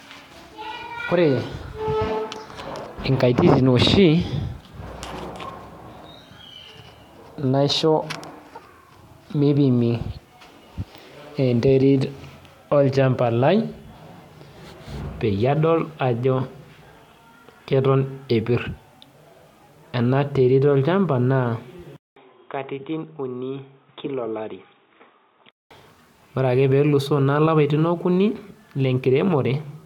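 After "olchamba na", a 200 ms gap at 21.96 s brings quieter, dull audio with nothing above 3.8 kHz and its own new background noise until 25.71 s. This is likely an input switched to a poorer device, since a plain filter would not change the background noise.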